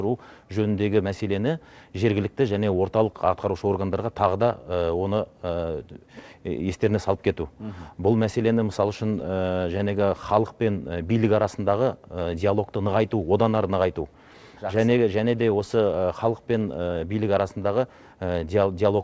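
Between 9.20 and 9.82 s there are scattered short gaps: about four brief dropouts, each no longer than roughly 10 ms, totalling around 40 ms. The receiver covered each one by extending the preceding sound, so the audio stays continuous but picks up small ticks and smeared hiccups. On a waveform these appear as short stretches of repeated, slightly flattened cycles. The spectrogram shows thin vertical seams where the texture briefly freezes, all below the call path's 8 kHz ceiling.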